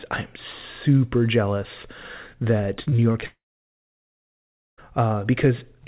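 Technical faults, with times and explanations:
2.82–3.24 s, repeated packet loss (robotic sound): over this short stretch five separate holes open up in the incoming speech, the longest about 37 ms, and each is patched by stretching the last bit of received sound forward. Because a new gap arrives before the previous patch has faded, roughly 28% of the stretch is concealed audio, giving a choppy, robotic texture with small pieces of the speech missing.
3.26–4.79 s, long network dropout: about one and a half seconds of audio never arrives, likely a network outage rather than brief packet loss. The receiver first carries the last sound on as a decaying buzz, but after a moment there is nothing left to extend, so roughly 1.4 s is heard as silence. Speech resumes at 4.79 s with the lost portion simply gone, not delayed.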